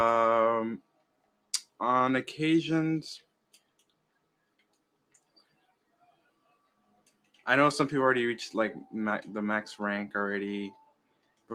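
A noise suppressor built for speech was left running on non-speech material. It treats steady tones, ambience and decay as noise, so the level swings by around 20 dB, and sustained parts pump and thin while sharp attacks mostly pass.

Sound was cut by the noise suppressor from 0.78 to 1.8 s, again from 3.19 to 7.47 s, and from 10.72 to 11.52 s. Held and fading material sinks by up to about 19 dB, with tails chopped short and transients poking through.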